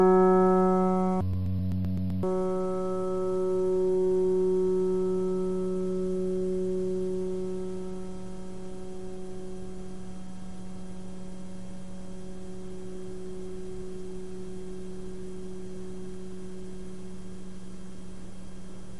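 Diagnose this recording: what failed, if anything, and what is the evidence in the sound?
The failure is in sample-format conversion: interleaved audio read as planar, from 1.21 to 2.34 s. The sound drops an octave, doubled and choppy, stuttering at 7.81 Hz. Each 128 ms block, which fits a 4096-sample buffer, has its halves played together at half speed.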